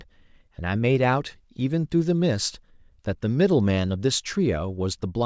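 Speech, with no technical faults audible anywhere in the recording.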